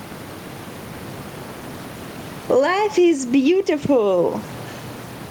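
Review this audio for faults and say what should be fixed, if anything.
Gain pumping runs throughout: the gain swings by around 10 dB, with room noise about 29 dB below the speech, likely because the microphone gain is set far too high and a fast limiter clamps every peak. A waveform shows a squashed, flattened envelope, and a spectrogram shows the level rising and falling as the gain swings. Lowering the input gain so peaks stay clear of the limiter would prevent it.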